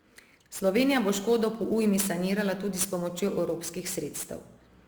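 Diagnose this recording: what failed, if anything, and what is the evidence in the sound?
The converter stage failed, with sample clock jitter present across the whole recording. A hiss-like roughness rides on the speech, loudest on strong, bright sounds such as sibilants and vanishing in the pauses. The converter's clock wanders by roughly 10 microseconds, so each sample is taken slightly early or late. Where the waveform changes fastest, that timing error becomes an amplitude error, here roughly 15 dB below the signal.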